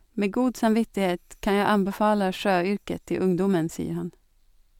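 A short speech recording with no audible technical faults anywhere in the signal.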